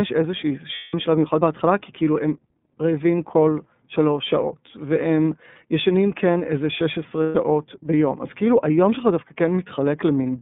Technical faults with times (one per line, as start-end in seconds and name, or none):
0.00-10.42 iLBC codec
0.75-0.94 lost iLBC frames
7.23-7.36 lost iLBC frames